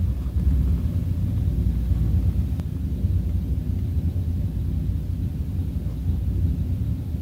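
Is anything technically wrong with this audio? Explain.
Yes. A doubled audio track runs from 0.40 to 2.60 s: a second full-band copy of the sound trails about a tenth of a second behind, roughly 5 dB quieter, likely from the audio being captured again through a slower path. It has no decay or room colour, and it cuts in and out abruptly.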